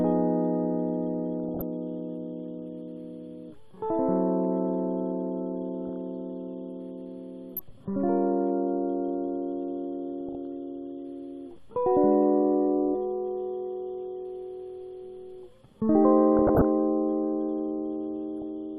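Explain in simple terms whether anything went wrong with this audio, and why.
Weak digital radio reception let data errors slip past error correction, causing DAB burbling: brief blips of noise over the music at 1.44–1.62, 5.87–5.89, 7.54–7.71, 10.21–10.35, 16.37–16.65 and 18.42 s.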